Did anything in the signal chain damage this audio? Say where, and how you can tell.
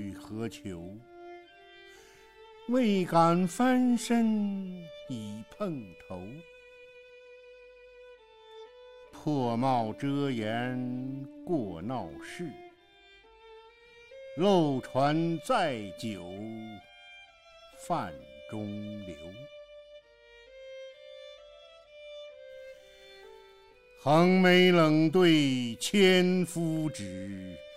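No, nothing in the signal chain audibly damaged this audio. None of the stages from capture to playback has left a mark that a careful listen can pick out.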